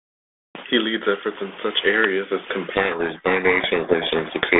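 Speech heard through a G.726 telephone-band codec, which fits 32 kbit/s, suffers a codec payload misread from 2.72 s to the end, just after "in such areas as". The decoder takes the ADPCM code words with their bit order reversed, so the speech is buried in harsh distortion. On a spectrogram this shows as dense broadband noise filling the band up to about 3.5 kHz, and the waveform turns ragged and noisy.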